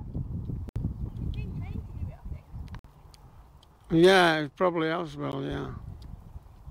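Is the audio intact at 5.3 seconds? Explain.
No: a Bluetooth stall at 5.32 s cuts the sound to 14 ms of silence, likely because interference delayed packets and the headphones' buffer ran dry.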